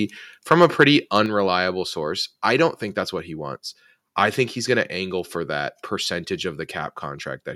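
A speech recording with a harsh, crackling edge on the loudest syllables between 0.51 and 0.84 s, and again more briefly from 1.15 to 1.17 s. The waveform tops are flattened there, with peaks pushing about 5 dB and then about 2 dB past the converter's limit and around one percent of samples clipped. This is microphone overload, likely from input gain set too high for the converter, so the extra level simply gets sliced off. At 1.26 s, just before "source I don't think", the speech and the background noise floor both drop suddenly by about 4 dB. The drop comes in one step rather than as a smooth fade. That is the microphone volume stepped down, likely the call software reacting to the distorted peaks just before it by lowering the device's input gain in a single step.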